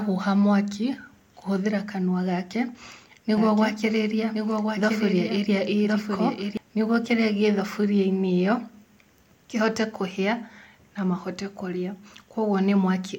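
Speech here, and from 3.37 to 6.57 s there's a doubled audio track: a dry, full-band second copy trails about a second behind, roughly 5 dB down, cutting in abruptly just before "nĩ guo kĩrĩa gĩ" and out just as abruptly. Most likely a slower capture path or an edit left two copies stacked out of step.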